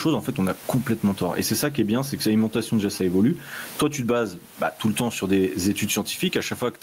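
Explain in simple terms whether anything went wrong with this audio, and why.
All through the speech, the room background swells in each pause and sinks whenever the talking gets loud, so the sound seems to breathe and feels squashed. This is gain pumping, likely from microphone gain set far too high, making a fast limiter keep pulling the level down sharply.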